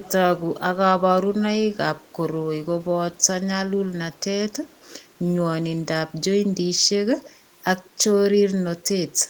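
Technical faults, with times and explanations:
0.02–0.11 s, 2.0–2.15 s, 4.71–4.87 s and 7.26–7.3 s: echo leak. Brief, faint copies of the speech trail 135 ms behind, far below the main level, likely loudspeaker pickup an echo canceller failed to remove.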